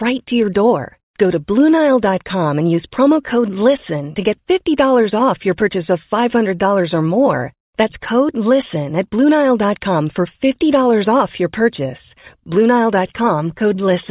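A speech recording, and nothing is technically wrong with it.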